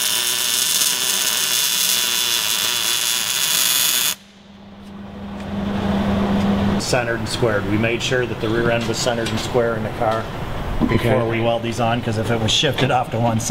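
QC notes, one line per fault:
No faults heard anywhere in the recording.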